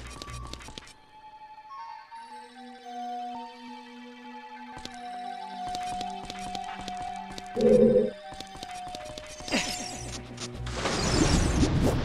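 No technical faults can be heard anywhere in the recording, and the signal stays continuous and stable throughout.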